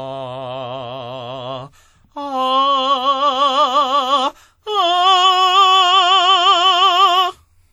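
WMA compression runs throughout this music clip. It is likely a transform codec with long blocks, and the damage, which fits a bitrate around 48 kbps, is plainly audible: quantisation noise smears into a ringing, washy haze, with hiss breathing along with the music.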